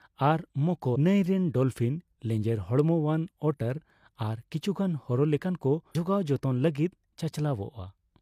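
Speech clip with two short glitches from damaged data in a compressed stream, at 0.92 to 0.96 s, just before "ᱱᱟᱹᱭ ᱨᱮᱱ ᱰᱚᱞᱯᱷᱤᱱ", and at 5.91 to 5.95 s. Corrupted bytes there throw the decoder off its frames until it resyncs on the next good header.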